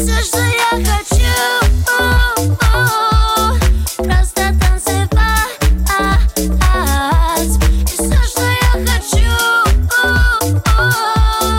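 A drift correction step is audible from 0.53 to 1.15 s and again from 8.93 to 9.72 s. In each span the audio slows by about 5.5% and drops in pitch by roughly 97 cents, just under a semitone, then snaps back to normal speed and pitch. The likely cause is clock-matching software abruptly lowering the playback rate to rebalance its buffer, so speed and pitch sag together for under a second.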